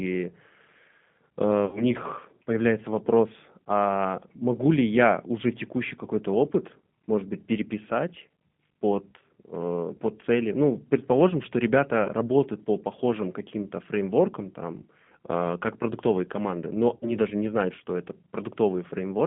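The whole clip carries G.729 codec damage. The speech is band-limited to roughly 150 Hz to 3.5 kHz and sounds rough and synthetic, which fits 8 kbit/s G.729A. VoIP packet loss concealed by the speech codec occurs at 1.65 to 1.84 s, 12.04 to 12.10 s, and 16.96 to 17.12 s. The decoder fills the gaps of 80, 20 and 60 ms with a fading buzzy tone or coloured noise, and the voice stays weak briefly afterwards.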